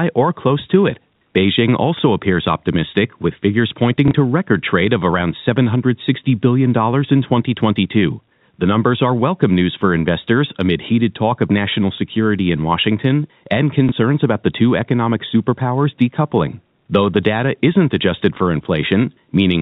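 At 4.08 s and again at 13.89 s, the audio gives a brief blip: about 30 ms of sound played twice over, before it snaps back. This is packet loss with the last packet repeated. Each gap fits a single lost 30 ms packet, and the receiver filled it by replaying the previous one. The telephone-band G.711 coding stays capped at 4 kHz throughout.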